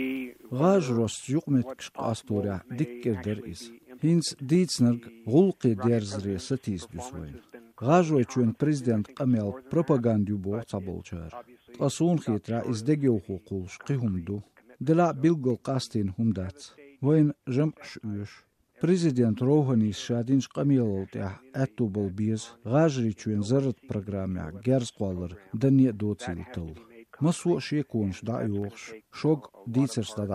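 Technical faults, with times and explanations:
0.17–28.62 s, clock drift buffer slips: about 15 clicks every 2.19 s, likely from a few samples slipping between mismatched clocks; evenly spaced vertical spectrogram lines.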